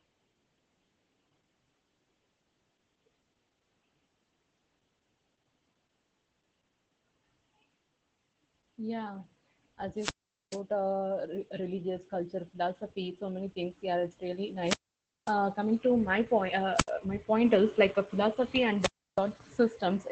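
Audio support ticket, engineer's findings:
Opus voice compression, whole clip: speech muffled and slightly hoarse, faintly robotic. Spectrogram shows a hard ceiling at 8 kHz (wideband SILK at 12 kbps) with smeared, coarse harmonics. SILK linear prediction with a coarsely coded excitation at this low rate.

Wireless microphone squelch dropout, four events: 9.96–10.61 s (mute 0.43 s), 14.64–15.34 s (mute 0.54 s, ends just before "coming to my point"), 16.74–16.91 s (mute 0.08 s, between "coming to my point" and "my point"), 18.80–19.21 s (mute 0.32 s, after "like a philosophy"). Hiss rises, then near silence, then speech returns. Waveform shows a flat gap bracketed by noise; spectrogram shows a broadband static smear, then an empty column. FM link fading below the receiver's squelch threshold.

Dropped buffer (overrun), 11.35 s: small skip forward, no silence. Waveform shows a sharp discontinuity where the two sides are spliced; spectrogram shows a thin vertical broadband line. 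Likely an input overrun, with a few milliseconds of samples overwritten before being read.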